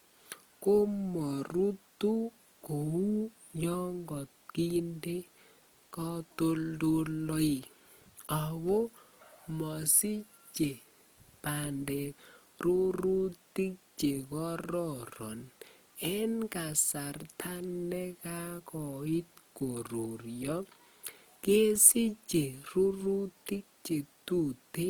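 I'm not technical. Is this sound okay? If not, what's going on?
No. From start to finish the speech has a plainly grainy, rough texture, most likely from Opus compression, a way of shrinking audio files that was squeezed harder than it comfortably allows here. The full range from low to high is still present, so it doesn't sound muffled. Unlike MP3 squeezing, which leaves a watery, swirling sound, this one fills the gaps it can't afford with a fizzy, sandy grain.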